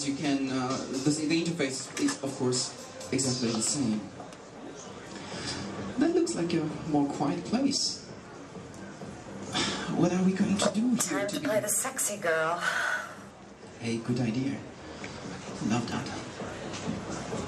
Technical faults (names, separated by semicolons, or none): none